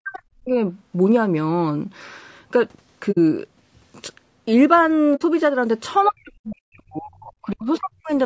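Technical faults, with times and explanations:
Throughout: low-delay AAC compression, likely AAC-ELD at a low bitrate near 32 kbps. Short frames blur the harmonics, so speech sounds rough and grainy.
0.00–0.55 s: speech suppressed in double talk. Speech dips sharply, by up to about 40 dB, for about half a second. An echo canceller likely mistook it for loudspeaker echo.
3.11–3.18 s and 5.15–5.22 s: AAC frame loss with muting. Each time about 60 ms of sound goes missing. The decoder zeroed it, leaving soft-edged holes.
6.09–8.10 s: speech suppressed in double talk. For about two seconds the speech is turned down, by up to about 40 dB, likely as the canceller fights echo.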